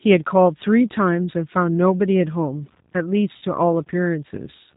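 Throughout, the speech carries the character of the G.729 codec. Nothing above 4 kHz survives, so the sound is narrowband and dull. The coder rebuilds each 10 ms frame from a vocal tract filter, a pitch predictor and a handful of pulses, which leaves the speech intelligible but rough and slightly synthetic. The damage is plainly audible, and the coarseness fits an 8 kbit/s codec.

From 3.38 s to 3.44 s there is VoIP packet loss concealed by the speech codec. About 40 ms of audio went missing, which fits two lost 20 ms packets. The decoder filled the gap by repeating its last pitch and filter settings with falling gain. That stretches the sound into a brief buzzy tone or coloured noise that fades. Because each frame builds on the previous one, the speech stays weak or distorted for a short time after the loss ends.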